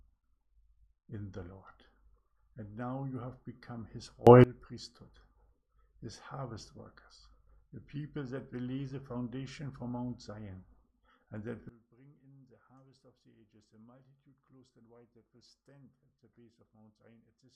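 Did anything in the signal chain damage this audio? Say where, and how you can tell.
Yes. Sudden gain jumps: up about 24 dB at 4.27–4.44 s, down about 21 dB from 11.69 s on, background noise moving in step. This is likely an unramped digital gain change.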